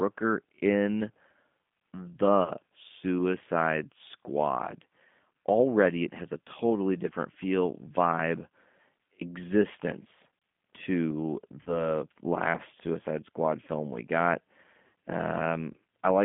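Throughout the speech, the G.729 codec damage is plainly audible. The line is limited to about 150 Hz to 3.5 kHz. Within that band the speech has the slightly rough, synthetic texture of a coder that rebuilds each 10 ms frame from a vocal tract filter, a pitch predictor and a handful of pulses, which fits an 8 kbit/s G.729A link.

At 2.44 s, VoIP packet loss concealed by the speech codec replaces about 30 ms of audio. The decoder stretches its last pitch and filter into a brief extension, and the sound stays weakened until about 2.51 s as frames rebuild from one another. The sound points to a single lost packet. The same happens at 11.63 s, again about 30 ms lost, with the damaged stretch lasting until 11.88 s. At 14.87 s, about 60 ms is lost, which fits two packets. The concealment fades out by 14.90 s.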